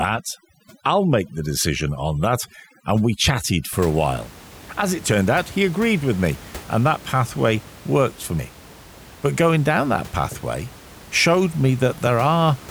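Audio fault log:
0.0–3.72 s, overdone noise removal. Noise reduction was set too strong. Frequency bands near its noise estimate are pulled down or cut off. Quieter parts of the speech vanish with them. The background drops and breaks up into twinkling specks. This lasts up to "a while".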